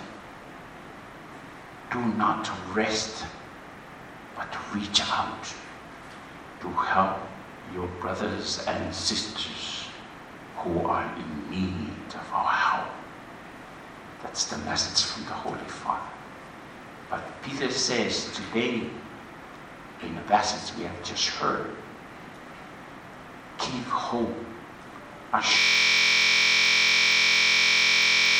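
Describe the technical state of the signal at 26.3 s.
At 26.3 s the signal is inside a system hang loop that runs from 25.59 s to the end of the clip. The playback system stopped supplying new audio while the output hardware kept replaying the same ring buffer, so one 23.22 ms fragment repeats about 120 times. That short loop fits a 1024-sample buffer, and at 43.1 repeats per second it turns into a steady, rough buzz at that rate rather than a recognisable sound.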